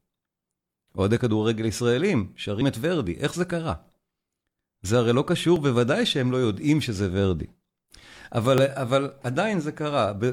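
A speech clip with overlap between stream segments. Brief skips occur at 2.62 s, 5.56–5.60 s and 8.58–8.61 s, which fits one-second segments with overlapping timestamps.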